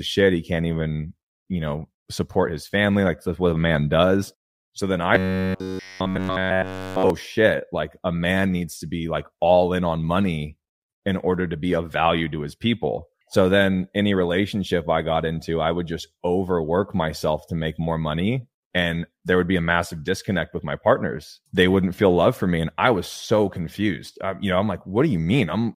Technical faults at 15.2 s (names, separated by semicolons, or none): none